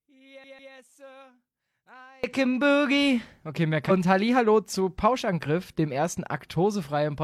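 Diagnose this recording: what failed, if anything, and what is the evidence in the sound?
From the start to 2.24 s, just before "can boogie", the speech drops about 28 dB and leaves a faint residue. This is likely one channel inverted in the analogue wiring: reversed polarity cancels the centred signal when the channels sum to mono.

From 0.44 to 0.73 s the same 0.15 s of audio repeats twice in a quick, even stutter with a brief mute at each jump. This is a CD stuck on one turn: at the storage stage the laser falls back one track at the same spot.

At 3.86 to 3.92 s the audio lurches forward with a short blip, skipping material. The likely cause is a stream segment skipped at the network stage: one segment failed to arrive and the player carried on with the next.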